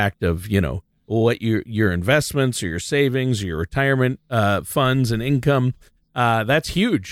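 Listening to the speech recording, nothing stood out as a technical fault at any point.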